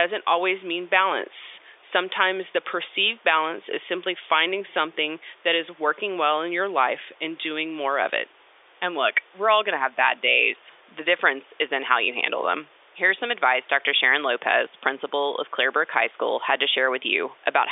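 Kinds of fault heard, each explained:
No faults can be heard.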